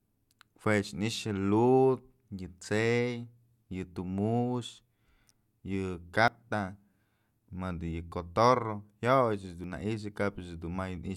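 At 6.28 s, 8.12 s and 9.64 s the speech jumps forward with no gap, likely a dropped buffer (overrun): samples were overwritten before being read, so about 40 ms is lost at the first two points and roughly 70 ms at the third.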